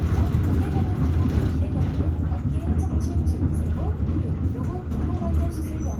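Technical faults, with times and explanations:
No technical faults are audible anywhere in the clip.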